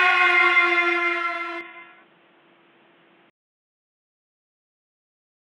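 At 1.61 s the sound abruptly narrows and turns boxy, with nothing above 3.8 kHz, and it returns to full bandwidth at 3.30 s. There is no gap at either transition. During that stretch the level drops by roughly 5 dB, and a different background noise floor appears about 30 dB below the signal. This pattern is most likely an input switched to a poorer device, where the system briefly routed capture through a band-limited microphone or call-profile path.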